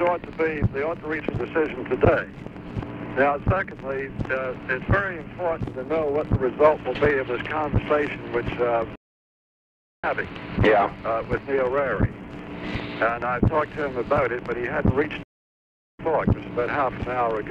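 At 8.95 s the audio cuts off in mid-flow and stays silent until 10.04 s, a gap of about 1.08 s, then resumes. A second break runs from 15.23 to 15.99 s, lasting 0.76 s. Both are playback stalls, likely the player running short of data or its thread being held up. On a waveform each shows as a flat line. A spectrogram shows a blank vertical band there.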